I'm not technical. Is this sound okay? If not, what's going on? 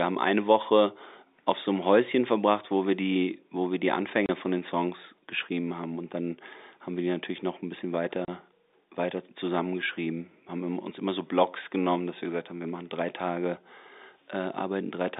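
No. At 4.26 s, between "die wo wir die" and "von den", and at 8.25 s, after "natürlich noch ein bisschen", the speech drops out for about 30 ms. This is packet loss filled with silence: a small chunk of audio went missing in transit and the receiver played a gap instead, leaving a brief hole.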